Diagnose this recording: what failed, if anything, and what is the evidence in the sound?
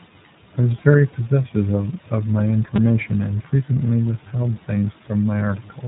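The whole clip has gone through the iLBC codec. The band stops at 3.8 kHz, and the speech has that plainly audible rough, slightly synthetic texture. That fits iLBC's 15.2 kbps mode, where each 20 ms frame's excitation is coded on its own without reference to the previous frame.

Separately, there's a repeated buffer at 2.76 to 2.78 s, between "possessive of my" and "and frequently withheld things". It sounds like a tiny buzz, with a short chunk that fits a 5 ms buffer replayed four extra times with hard joins. This points to the driver or buffer stage missing its deadline and replaying the last buffer. Next to nothing of the audio seems to be lost.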